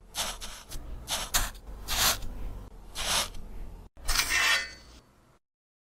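A skip ahead occurs at about 0.73 to 0.84 s: roughly 0.4 s of audio is missing, and the two sides of the jump are spliced directly with no gap or fill. The discarded stretch was lost in transit or dropped by an overflowing jitter buffer while later audio was already queued, so playback jumps forward and its delay falls by about the same amount.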